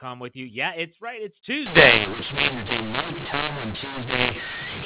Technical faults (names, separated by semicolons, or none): mu-law and A-law mixed up